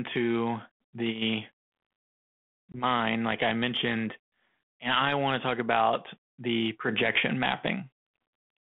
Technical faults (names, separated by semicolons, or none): packet loss on an ADPCM call